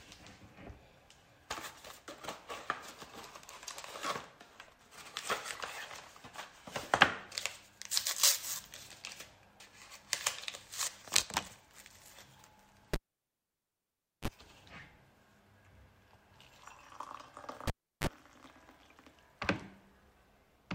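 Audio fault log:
12.94–14.28 s: cable pulled and plugged in. A pop, then near silence for 1.29 s. A 30 ms burst of 50 Hz mains buzz follows as only the plug tip touches, then a pop as sound returns.
17.67–18.07 s: cable pulled and plugged in. A shorter dropout of 0.34 s between two pops, with a 32 ms burst of 50 Hz buzz during reinsertion.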